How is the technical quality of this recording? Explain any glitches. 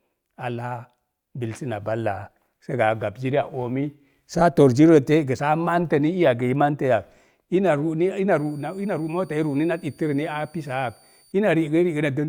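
The recording has one clear fault. From 8.31 to 11.32 s a faint high whistle near 4.6 kHz, wavering slightly, sits roughly 35 dB below the speech. This is a switching supply whistle, where a power supply's converter drops into an audible switching rate.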